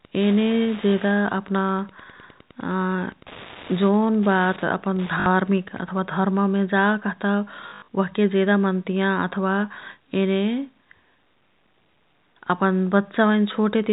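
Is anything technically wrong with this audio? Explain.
Yes, the speech has two faults. Wi-Fi interference runs from 0.0 to 5.99 s, ending just before "धर्ममे जा कह्ता". A nearby radio's beacons, every 102.4 ms, are rectified by the audio circuit, giving a steady ticking about ten times a second, about 20 dB under the speech.

Packet loss with last packet repeated occurs at 0.90–0.92 s (20 ms), 5.20–5.26 s (60 ms), and 7.68–7.88 s just after "धर्ममे जा कह्ता", where 160 ms is lost in scattered runs over 200 ms, the longest 80 ms. The receiver replays the previous packet, so longer runs buzz robotically, consistent with 20 ms packets. The G.711 A-law telephone coding keeps the band below 4 kHz.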